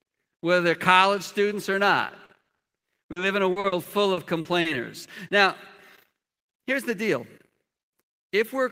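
From 2.07 to 2.63 s, right after "they're college students or", repeated packet loss makes the speech choppy, with pieces missing. Four gaps, the longest 60 ms, are mostly patched by stretching the previous sound, covering about 29% of the span, and some audio is simply missing. The same fault returns from 3.12 to 4.81 s with eight shorter gaps, none over 40 ms, concealing about 19%. On a spectrogram the patched spots show smeared, flat horizontal bands where the repeated sound sits, with abrupt vertical seams where real audio resumes. The waveform shows brief dropouts between them.

From 6.44 to 7.52 s a jitter buffer speed-up plays the speech about 4% fast at unchanged pitch. The receiver had more audio queued than it wanted and trimmed short pitch-period pieces, about 50 ms in total. The waveform is subtly compressed in time, and a spectrogram shows harmonics at normal spacing but with syllables packed a little closer together.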